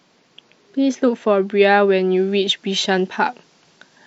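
Speech, with pre-emphasis left on from 2.17 s to the end: a CD 50/15 µs treble shelf, about 8 dB up at 10 kHz, sounds thin and sibilant, distinct from a broad EQ boost.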